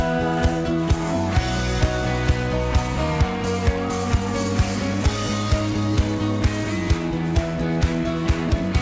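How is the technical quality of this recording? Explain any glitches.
The recording carries no glitches or dropouts, and its bandwidth stops at 8 kHz, which is consistent with a wideband call codec such as G.722 at 64 kbps over a WebRTC call path.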